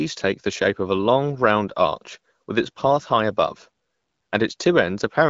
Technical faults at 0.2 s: none

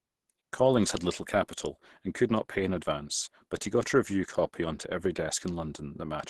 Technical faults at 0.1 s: Opus compression

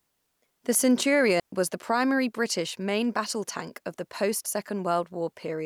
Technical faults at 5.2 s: none

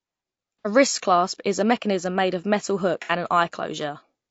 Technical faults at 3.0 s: low-delay AAC compression; AAC frame loss with concealment

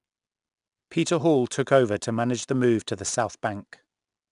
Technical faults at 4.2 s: 4-bit ADPCM compression

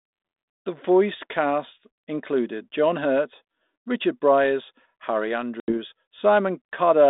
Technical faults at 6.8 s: none

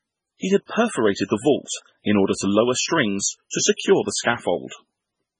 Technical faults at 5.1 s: MP3 compression

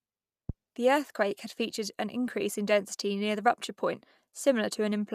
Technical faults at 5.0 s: none

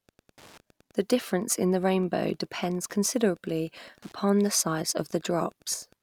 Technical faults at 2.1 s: Wi-Fi interference

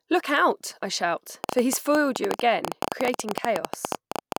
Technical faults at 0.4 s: none

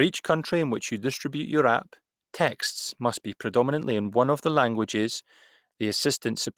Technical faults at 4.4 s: none

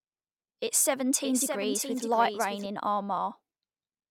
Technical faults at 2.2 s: doubled audio track

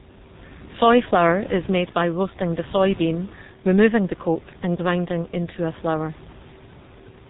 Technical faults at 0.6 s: G.723.1 codec

